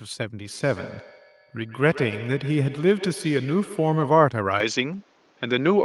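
From 0.41 s to 4.38 s the speech carries feedback echo between two devices. A second device in the room plays back what this microphone sent, and the microphone picks it up again, beyond the reach of its own echo canceller. Each syllable returns roughly every 150 ms, thinner and more ringing, peaking at about 15 dB below the direct speech. On a spectrogram, faint copies of each word trail behind it at even spacing. The waveform shows small repeated bursts after each onset.

At 4.60 s, with no gap, the sound abruptly turns duller and more boxy until the end at 5.84 s. The level shifts by roughly 5 dB, and a new background noise sits around 40 dB under the speech. The likely cause is an input switched to a poorer device. On a spectrogram, the upper frequencies vanish at that instant, leaving a flat ceiling, and the noise floor changes colour. The waveform steps in level there.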